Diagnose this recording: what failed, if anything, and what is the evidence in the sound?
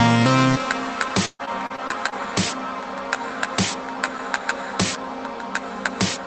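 Repeated packet loss (robotic sound) from 1.25 to 2.28 s, at the network stage: six gaps, the longest 137 ms, are bridged by extending the preceding sound. Over a quarter of that stretch is concealment, so it turns choppy.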